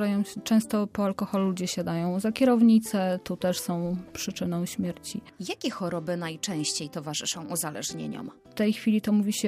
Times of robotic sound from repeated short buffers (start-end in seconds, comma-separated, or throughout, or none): none